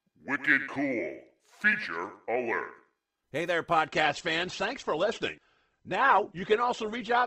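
At 3.87 s the speech drops abruptly to a lower-quality rendition and stays there to the end of the clip, with no gap at the switch. This is an adaptive stream at a lower bitrate: the player moved to a cheaper encoding when throughput fell. Nothing is present above about 8.2 kHz, so sibilants lose their edge, and coding artefacts become audible. The change is consistent with a step from roughly 64 kbit/s Opus down to around 16 kbit/s.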